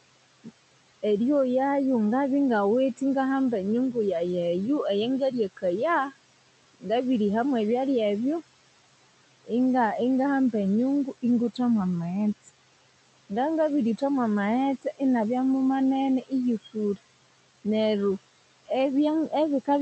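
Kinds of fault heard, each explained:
Noise suppressor artifacts: A noise suppressor turns down each frequency band it judges to be steady noise, frame by frame. Here the background is cut by about 18 dB. It sinks in the gaps between phrases and comes back up underneath the speech, so it seems to pump.
Speech cut by the noise suppressor: The suppressor mistakes parts of the speech for noise and lowers them with the background. This happens between 5.2 and 5.64 s, by up to about 11 dB, and between 16.27 and 16.98 s, by up to about 18 dB. Each time roughly a tenth of a second sounds swallowed.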